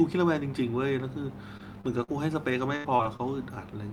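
At 1.57 to 1.61 s and again at 1.81 to 1.85 s, short concealed packet loss occurs: about 20 ms of the speech stream never arrived in time, and the receiver extended the preceding sound to cover each hole before blending back. Both spots are heard as a brief smear or wobble, and a quick consonant can slip away.

Overlapping the first of these, from 1.59 to 1.61 s, and again at 1.97 to 1.99 s, a lost packet was rebuilt from error correction. The following packet carried a low-bitrate duplicate of the missing 20 ms, so nothing drops out, but those frames come through rougher and noisier.

From 2.03 to 2.10 s, a burst of packet loss removes about 40 ms of audio. The receiver covered roughly 45 ms by stretching the last sound and letting it fade as a held buzz or dying hiss, then jumps ahead with the middle gone.

Between 2.50 and 3.21 s, repeated packet loss produces robotic sound. Packets failed four times, the longest gap lasting about 85 ms, and about a fifth of that span is patched guesswork, around a tenth of a second of it rebuilt, leaving a choppy texture with fragments missing.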